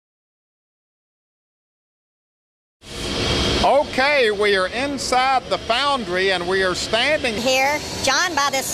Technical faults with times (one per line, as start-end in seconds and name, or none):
7.38-8.73 section at the wrong speed